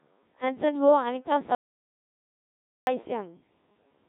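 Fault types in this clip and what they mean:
Codec 2 vocoder: heavy vocoder damage runs through the whole speech clip. The voice is rebuilt from pitch, voicing, energy and a spectral envelope at about 1.3 kbit/s, with nothing above 3.8 kHz, so it sounds robotic and buzzy because the original waveform is not kept.
Audio dropout to silence: from 1.55 to 2.87 s the sound cuts to silence with no room tone, and about 1.32 s is lost. This is likely the input being interrupted while the recorder went on writing silence.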